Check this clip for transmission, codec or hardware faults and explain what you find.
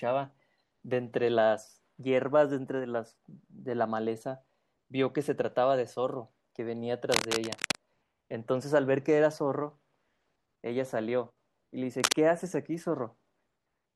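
A hardware fault is present: cable scratch noise at 7.12 to 7.80 s, a few dB below the speech, and at 11.97 to 12.13 s, about as loud as the speech. The dense, ragged rustling bursts likely come from a worn cable or connector shifting, with its contact resistance fluctuating rapidly.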